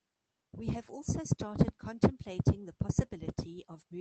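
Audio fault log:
No fault was found in this speech clip. It went through a WebRTC call path with the Opus codec, and its content extends up to 8 kHz.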